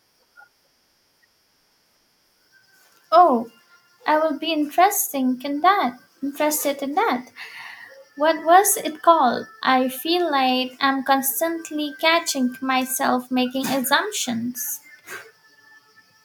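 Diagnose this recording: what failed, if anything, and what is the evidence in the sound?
No fault can be heard.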